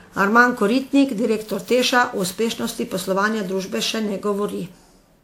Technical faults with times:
0.00-5.23 generation loss

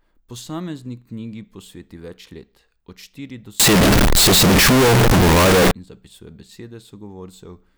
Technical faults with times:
3.60-5.71 float read as integer

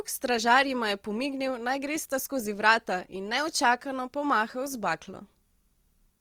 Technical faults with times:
0.00-6.21 Opus compression

